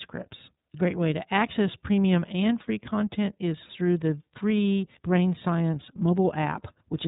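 Throughout, the speech sounds rough, faintly synthetic and dull, with nothing above 3.8 kHz. This is iLBC codec damage from coding each 30 ms frame on its own.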